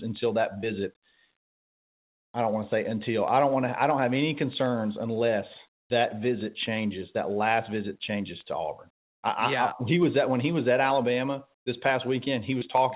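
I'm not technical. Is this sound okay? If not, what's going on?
No. At 5.8 s, for a tenth of a second, there's comfort noise in place of the background: the real room sound drops out and a flat, much quieter hiss stands in. That's likely the sender going silent during a pause and the receiver filling the gap with made-up noise.

Right at the end of that, around 5.88 s, the speech comes back with its onset clipped by the voice detector. About 20 ms of the start is missing, so it begins abruptly. That's likely because the detector was a moment late noticing the talking had resumed.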